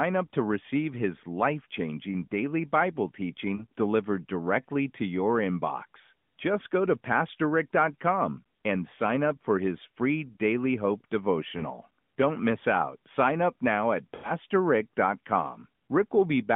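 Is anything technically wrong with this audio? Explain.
Yes. There are lost AMR speech frames at 3.56 to 3.64 s, just before "delivered directly to your", at 7.36 to 7.40 s, after "go to", and at 11.58 to 11.65 s. A longer one comes at 14.16 to 14.31 s, after "up now at". Radio errors corrupted frames, so the decoder repeated the last good pitch and vocal tract settings at falling gain. The first three sound like brief warbling dips, each fitting one 20 ms frame. The last is drawn out and fading, fitting a run of about four frames, before speech returns rough. The narrowband phone-line band stays intact.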